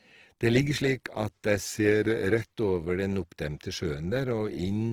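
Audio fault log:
throughout, Opus compression: the speech comes across rough and grainy, with a noisy fizz standing in for fine detail, yet the bandwidth stays wide, reaching about 20.3 kHz. That points to Opus in its CELT music mode, likely starved at around 16 kbps and filling bands with noise instead of real content.
1.65 to 2.41 s, drift correction step: the speech abruptly slows by about 5.6% and sags roughly a semitone, then snaps back to normal at 2.41 s. Speed and pitch move together, the mark of a likely clock-matching routine stepping its playback rate to rebalance a buffer.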